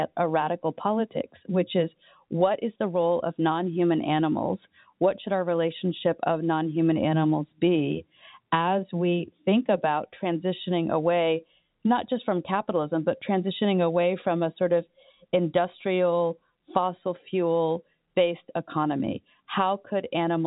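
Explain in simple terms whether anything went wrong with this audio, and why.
Nothing went wrong here.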